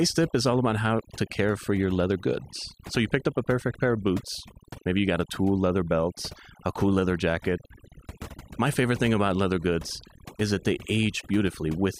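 Overdone noise removal runs through the whole of this speech recording, from start to finish. The noise reduction was pushed far too hard, so any frequency band sitting close to the level it treated as noise gets pulled right down or switched off, and the softer parts of the voice are caught in that cut. The result is a background of near silence scattered with twinkling specks.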